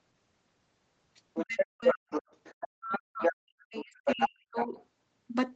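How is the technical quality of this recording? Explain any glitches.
The recording has two linked call faults: a second voice leaks through, and the talker's own speech is repeatedly pushed down while that voice is present.

Other side's voice leaking through, from 1.34 to 3.33 s and again from 3.76 to 4.67 s: the echo canceller likely failed to strip the loudspeaker playback out of the microphone signal. The far-end voice therefore rides along in the recording, roughly as loud as the talker or a little louder. It is clearly audible as a competing second speaker rather than a faint background trace, and it overlaps most of the clip's middle section.

Speech suppressed in double talk, from 1.45 to 2.11 s and from 2.76 to 4.79 s: with both sides talking at once, the echo canceller could not tell the near talker from the echo, and likely attenuated everything. The talker's voice sinks sharply, at its deepest by around 40 dB, close to silence. 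Across the first stretch about half a second is affected, and across the second about a second and a half, largely overlapping where the leaked voice is active. Throughout, the sound has no content above 8 kHz, which fits a wideband Opus call at around 20 kbps.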